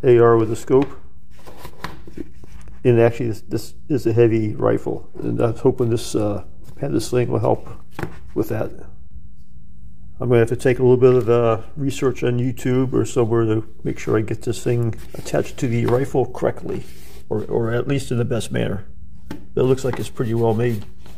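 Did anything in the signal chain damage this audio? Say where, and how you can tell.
Yes: DC offset, about -27 dBFS, throughout. A constant shift, pointing to the converter's analogue input stage, wastes headroom and shows as steady energy at 0 Hz.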